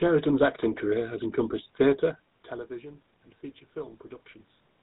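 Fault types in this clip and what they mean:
GSM full-rate codec: The speech carries a steady buzzy, gravelly roughness that stays plainly audible through the whole clip. This comes from a coder that models the vocal tract and drives it with a coarse, regularly spaced pulse train, consistent with a 13 kbps full-rate scheme. Nothing comes through above about 3.8 kHz. A simple band-limit would only dull the sound, whereas here the grainy texture rides on the voice itself.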